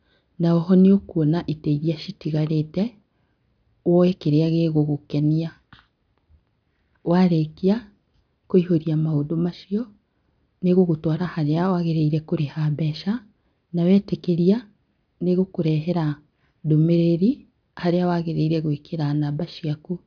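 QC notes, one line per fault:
No faults found in this recording.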